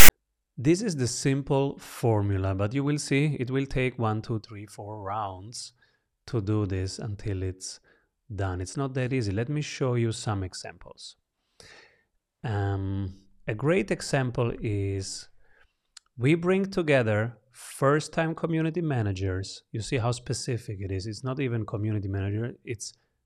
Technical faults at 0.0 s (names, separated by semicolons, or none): file tags played as audio